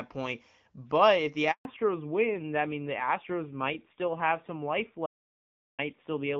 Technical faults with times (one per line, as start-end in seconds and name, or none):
1.51-1.65 handover gap
1.65-6.40 fallback to narrowband
5.06-5.79 audio dropout to silence